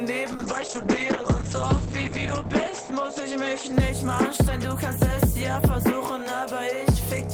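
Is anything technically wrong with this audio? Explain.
Yes, there's a call bitrate drop from 0.32 to 4.27 s. The bandwidth estimate fell, so the encoder coded more coarsely and the top end got cut to 8 kHz. It sounds muffled and rough, bottoming out for about 2.4 s, which fits a dip from roughly 32 to 9 kbps.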